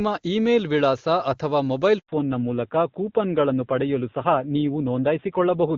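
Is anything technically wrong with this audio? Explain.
Yes. Right after "ಇಮೇಲ್ ವಿಳಾಸ ಅಥವಾ ಮೊಬೈಲ್", at 1.99 s, there is a handover gap. The call switched networks and no speech frames arrived during the switch. The voice fades out within a few tens of milliseconds. Then there is dead silence for 100 ms, until about 2.09 s, when the new link takes over. Whatever was said in that window is simply gone.

From 2.09 s to the end, there is a fallback to narrowband. Before the gap, the HD Voice codec sounds clear, which fits a high wideband rate such as 23.85 kbit/s. After the switch, the call drops to an older narrowband codec, at a rate that points to 7.4 kbit/s. Nothing above 4 kHz survives. The voice suddenly sounds duller, muffled and rougher for the rest of the clip.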